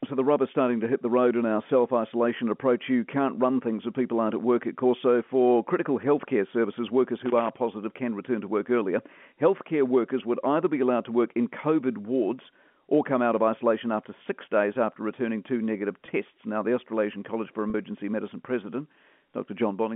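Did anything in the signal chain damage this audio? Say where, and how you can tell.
Yes. In the analogue wiring, a loose connector crackle runs from 7.22 to 7.50 s, between "critical healthcare services workers" and "positive can return to". A worn contact making and breaking chops the signal, and DC steps add pops. The waveform shows jagged spikes and brief dropouts. The spectrogram shows scattered broadband vertical streaks.

On the network, there is packet loss with pitch repetition at 16.06 to 16.08 s, just after "after returning two negative", and again at 17.70 to 17.74 s. Both gaps were bridged by looping the last pitch period, which produces a brief buzzy held tone within the 200–3400 Hz telephone band. The 20 ms gap fits one lost packet and the 40 ms gap fits two. The spectrogram shows frozen, flat harmonics, and the waveform shows identical repeated cycles.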